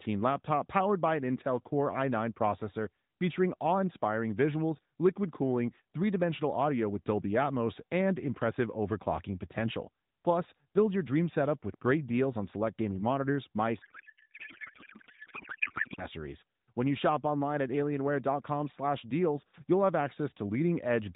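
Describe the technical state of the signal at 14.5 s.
At 14.5 s the signal is inside a codec payload misread. It runs from 13.82 s to 16.06 s, starting just after "select gaming monitors mice". The AMR frames were packed octet-aligned, but the decoder read them as bandwidth-efficient. Every field lands in the wrong bit position. The frames still decode, but into nonsense. The speech is replaced by garbled noise and warble that barely tracks it. Around it, the narrowband AMR sound fits a 12.2 kbps mode.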